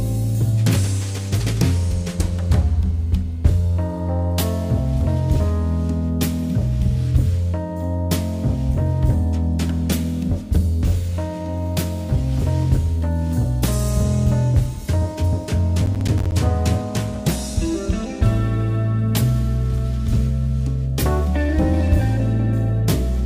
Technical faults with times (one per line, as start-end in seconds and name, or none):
15.86-16.32 processor overload crackle